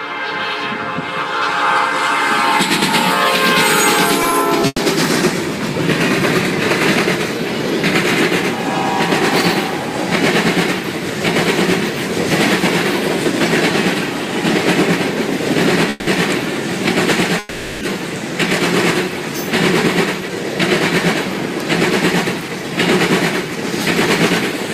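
From 4.23 to 4.79 s there's a stretch of repeated stalls, a stutter: four short hiccups where the sound hangs on itself, the longest about 110 ms, about 140 ms of held-over sound in all, roughly a quarter of that half-second. Packets were trickling in late, so the playout buffer kept draining and the receiver stretched the last bit of sound to cover each wait. Nothing actually goes missing, but the flow drags and catches.

Then come two call audio freezes. At 15.90 to 16.09 s the sound stops moving forward and smears into a fading buzz or hiss for about 170 ms before picking up exactly where it left off. At 17.39 to 17.83 s the same thing happens for longer, about 420 ms, with the hold-over decaying but never dropping to silence. The likely cause is packets stuck in transit, leaving the buffer empty while the receiver filled the gap with a continuation of the last sound. Each one pushes everything after it that much later, with nothing lost.

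From 19.45 s to the end, the audio runs about 3% fast at unchanged pitch. That's a jitter buffer speed-up: with more audio built up in the buffer than it aims for, the receiver trimmed tiny pitch-period slices over and over, shaving off something like 150 ms to pull the latency back down.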